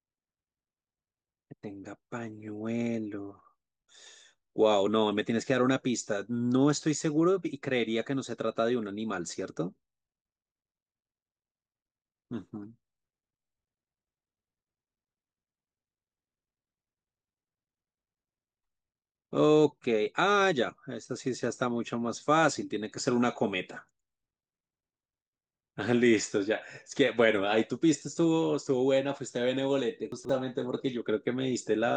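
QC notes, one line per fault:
30.12–30.29 s: chunks out of order. A short block of the speech plays late, after material that should follow it, which fits a chunk of about 43 ms displaced by roughly three chunk lengths. Nothing drops out, but the order scrambles briefly at three hard joins.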